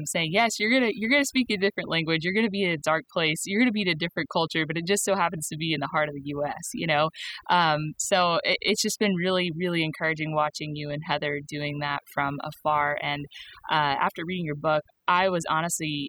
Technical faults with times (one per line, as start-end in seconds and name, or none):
0.00-16.09 overdone noise removal